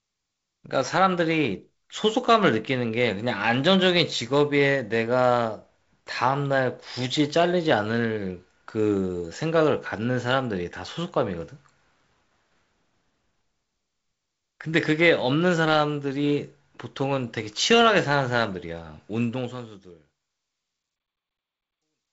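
No technical faults are audible.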